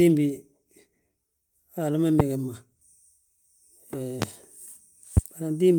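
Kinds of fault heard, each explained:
Loud pop: three sharp single pops, each about 30 ms, sit on top of the speech at 2.20, 4.22 and 5.17 s, at about 20, 20 and 15 dB above it. The speech continues underneath. Each is likely a sudden voltage spike from a switch, static or driver glitch.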